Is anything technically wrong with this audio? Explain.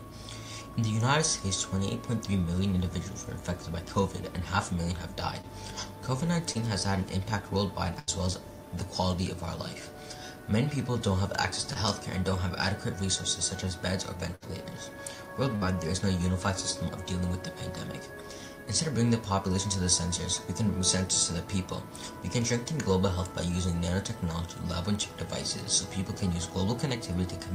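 Yes. There are three kinds of fault: short concealed packet losses, bursts of packet loss, and USB whine.

Short concealed packet loss happens at 5.41 s, 6.53 s and 11.73 s. Each time about 20 ms of audio failed to arrive in time, and the receiver patched the gap by extending the sound just before it and then blending back. Each one is a brief smear or wobble, and a very short sound inside it can disappear. These are much shorter than the bursts, so nothing is audibly held or faded.

Bursts of packet loss occur at 7.99–8.09 s (80 ms missing), 14.35–14.44 s (60 ms) and 15.56–15.63 s (60 ms). Several consecutive packets were lost here, so the receiver stretched the last sound and lowered its level as the gap continued. Unlike the short losses, you hear a held buzz or a fading hiss, and then the audio jumps ahead with that stretch gone.

USB whine runs from 22.28 s to the end. Current drawn in 1 ms USB frames leaks into the audio through the power or ground, producing a steady tone at 1 kHz that is strongest at its 2 kHz harmonic, roughly 35 dB below the signal. 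The fixed kilohertz-range pitch tells it apart from mains hum, which sits at 50 or 60 Hz and its low multiples.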